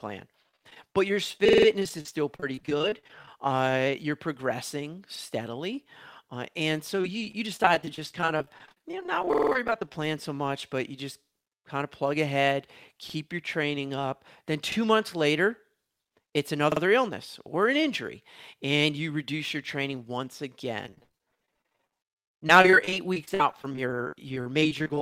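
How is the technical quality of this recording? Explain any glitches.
The quality is poor: the speech is repeatedly broken up by network and playback faults.

Repeated packet loss (robotic sound), 0.42–3.28 s, 6.99–10.06 s and 20.84 s to the end: dozens of short gaps, each at most about 42 ms, were patched by extending the preceding sound. The result is choppy speech with fragments missing.

Repeated buffer at 1.49, 5.16, 9.33, 13.10, 14.72 and 16.72 s: playback ran dry, so the last 46 ms block, which fits a 2048-sample buffer, played again up to four extra times. Each event is a short stutter with hard joins.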